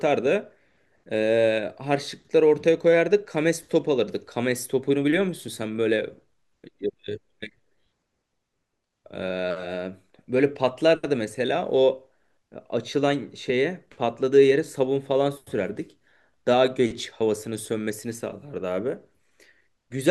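No technical faults occur anywhere in this speech recording, so there is nothing to describe in time order.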